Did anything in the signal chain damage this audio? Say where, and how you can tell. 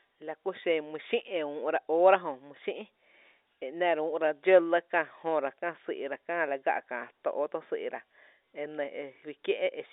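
No, nothing in the signal chain damaged this audio.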